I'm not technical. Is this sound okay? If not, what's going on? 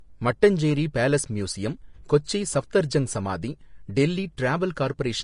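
No. The speech sounds hissy and grainy from start to finish. Nothing is heard above about 10.5 kHz, so the top end is missing. This is likely Vorbis compression set too low, which swaps fine treble detail for noise.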